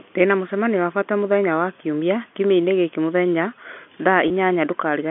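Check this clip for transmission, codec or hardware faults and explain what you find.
One transmission fault turns up, near the end of the clip. From 4.28 to 4.30 s there is packet loss with pitch repetition. About 20 ms of audio, which fits a single lost packet, never arrived, and the receiver bridged the gap by repeating the last pitch period. The speech holds for a moment on a slightly buzzy, sustained tone, too brief to fade into silence. The G.711 telephone coding carrying the call limits the sound to roughly 200 Hz to 3.4 kHz.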